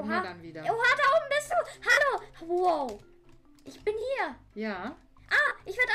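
Short noisy smears replace the sound at 1.92–1.97 s, 3.83–3.87 s and 5.48–5.51 s. These are lost LE Audio frames, patched by replaying the last spectrum with randomised signs.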